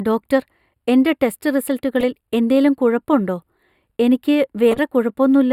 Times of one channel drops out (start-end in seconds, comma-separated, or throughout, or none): none